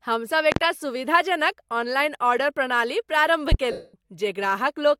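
Loud pops occur at 0.52 to 0.60 s, a quick double pop just before "सुविधाजनक ऑनलाइन ऑर्डर प्रणाली", and a single pop at 3.52 to 3.56 s right after "ऑनलाइन ऑर्डर प्रणाली प्रारम्भ". These are likely sudden voltage pulses added to the signal. They stand roughly 20 dB and 15 dB above the speech, which carries on underneath.

Lost LE Audio frames follow at 3.72 to 3.94 s, a gap of about 220 ms. The LC3 decoder fills the missing frames by repeating the last spectrum with scrambled phase and fading it out, so the speech turns into a noisy smear that sinks towards silence before the signal returns.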